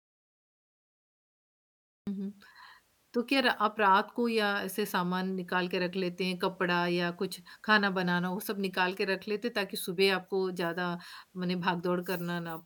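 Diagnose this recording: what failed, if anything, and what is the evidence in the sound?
The speech opens in an audio dropout to silence: the first 2.07 s are silent, no room tone at all, and the talker comes in mid-flow. That points to the input path, likely a device or link that wasn't connected yet while the recorder kept writing.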